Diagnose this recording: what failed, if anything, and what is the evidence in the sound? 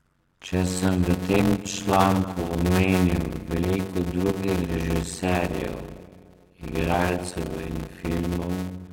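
The failure is at the driver or buffer stage, a block size mismatch (padded), present for the whole clip. The speech carries a steady buzz at about 91.9 Hz and runs at 0.533 times normal speed, yet its timbre stays natural. That fits a stage writing 256-sample blocks into larger reads, with each remainder zero-filled, so a silent gap lands in every block. A wrong playback rate would shift pitch, and buffer underruns would leave irregular gaps, not this evenly spaced buzz.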